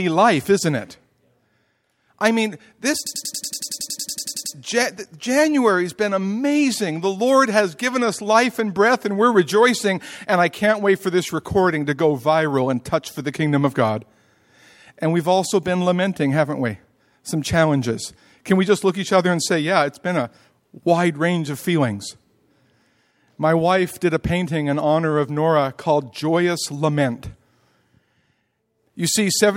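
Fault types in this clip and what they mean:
System hang loop: the computer or driver froze and a 93 ms chunk replayed 16 times, roughly 3.07 to 4.55 s, a machine-gun stutter at 10.8 Hz, fitting a 4096-sample buffer.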